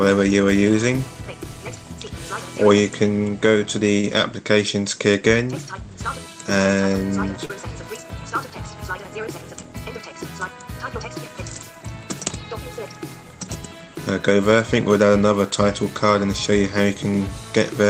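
Two spots of short concealed packet loss show up, at 4.00 to 4.04 s and 7.45 to 7.50 s. In each, a few tens of milliseconds of audio arrived too late for the decoder, roughly 30 ms the first time and 40 ms the second. The receiver patched each gap by extending whatever sound came just before, then crossfaded back into the real signal. You hear it as a quick smear or wobble.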